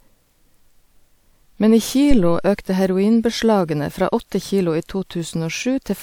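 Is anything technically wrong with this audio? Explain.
Yes. From 2.11 to 2.58 s, just before "heroinbeslagene fra", there is a phantom power thump. A supply voltage was switched on or off while the input was live, and that sudden DC step passed through the coupling capacitors into the signal path. It is heard as a deep, low-frequency thud that falls away with a decay of about 106 ms.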